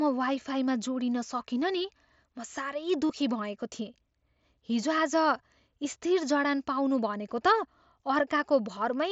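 Speech, carried over a Bluetooth headset link using the mSBC wideband codec. At 3.09 s, just after "म साह्रै", there is concealed Bluetooth headset packet loss. About 15 ms of audio went missing, which fits two lost packets. The receiver filled the gap by repeating a matching stretch of the preceding waveform. The patch is brief and sounds like a buzzy tone held at full level, with a small warble where the real sound resumes.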